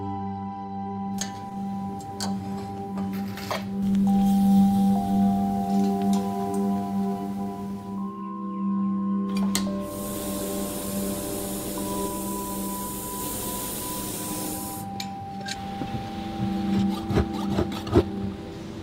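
From 0.59 to 1.74 s, packets kept arriving late, so the jitter buffer ran dry 16 times and the receiver stretched the last sound across each gap of up to 10 ms. That repeated stalling (stutter) fills 160 ms, about 14% of the span, losing nothing but making the audio drag and stutter. Later the jitter buffer overfilled, and a jitter buffer speed-up trimmed tiny pitch-period slices to drain it. From 15.23 to 15.85 s the audio runs at 112% speed, and from 17.84 to 18.33 s at 111%, each losing around 70 ms. Pitch holds steady while the pace sounds noticeably hurried.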